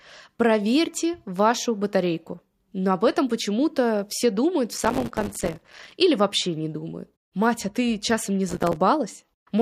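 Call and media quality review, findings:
Processor overload crackle, 4.78–5.92 s, after "все думают в", before "или вообще не думают": dense gritty crackle over the speech. Audio callback missing deadlines, many short buffers (a few ms each) dropped to silence. Waveform: rapid silent gaps with hard edges. Spectrogram: broadband vertical striations.

Same fault, 8.49–8.76 s, after "а ты часом не": shorter crackle burst, same signature of brief silent gaps from missed buffers, stopping when the load eases.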